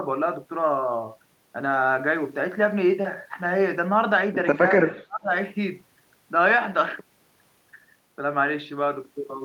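From 4.81 to 5.31 s the speech is pushed down by about 30 dB at its deepest, broken into dips and gaps that add up to roughly 0.4 s. It sounds like the talker is ducked and choppy. This is speech suppressed in double talk, likely an echo canceller that could not separate the near talker from loudspeaker echo while both sides spoke. On the waveform, the envelope collapses in patches. A spectrogram shows energy thinning.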